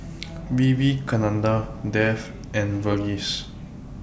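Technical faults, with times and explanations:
No technical faults are audible in this speech recording.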